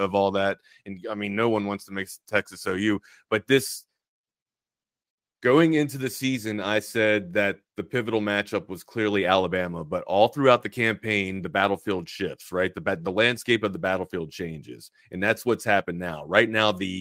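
No technical faults can be heard anywhere in this speech recording. At no moment does anything in the signal go wrong.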